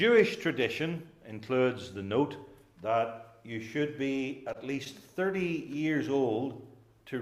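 At 4.27 s and again at 4.53 s the sound briefly hangs, with the current moment held about 15 ms too long and a faint buzzy dip before it moves on. Each is a short stall from a late packet: the packet missed its slot, the jitter buffer ran dry, and the receiver stretched the last sound until it arrived, then resumed from the same point. Nothing is lost, but timing slips by about 15 ms each time.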